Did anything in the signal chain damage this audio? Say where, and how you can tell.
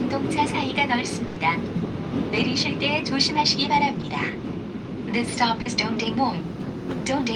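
Yes. A burst of packet loss at the network stage hits 1.27 to 1.40 s. About 90 ms is filled by continuing the last sound and fading it, and 80 ms of the sound is skipped. On a spectrogram it shows as a frozen, dimming band, then an abrupt jump.

Short concealed packet loss appears at 4.02 to 4.06 s (20 ms) and 5.62 to 5.68 s (40 ms). The receiver extrapolates the preceding sound across each hole and cross-fades back. The waveform shows a brief smoothed stretch, and the spectrogram a smear.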